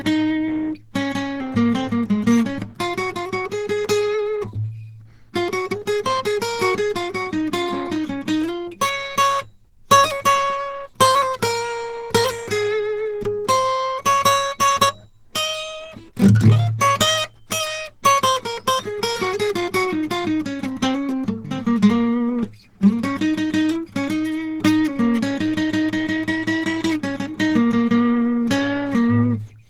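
From start to finish the music carries plainly audible Opus compression. Tones sound rough and grainy rather than clean. There is a muffled, hoarse quality too. The band still reaches up to about 20.3 kHz, so the top end is not cut away. The damage is in the texture instead. The encoder is likely running at a very low rate, around 16 kbps. The hoarse colour points to its hybrid mode.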